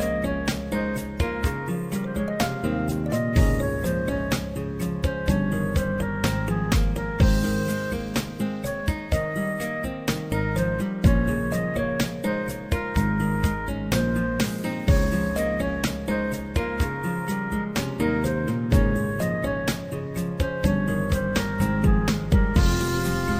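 There are no technical faults to describe in time order.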